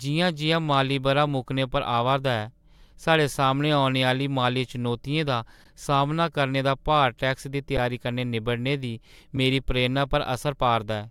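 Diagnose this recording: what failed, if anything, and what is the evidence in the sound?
The speech stops dead twice, at 5.64 s and 7.77 s, for about 13.4 ms and 10.7 ms, with little or no click going in and only a soft join coming out. That is an underrun with held sample at the driver or buffer stage. The output buffer ran dry, and the converter froze on its last value, leaving a flat line. Playback then resumed where it stopped, with essentially nothing lost. The second gap fits a 512-sample buffer.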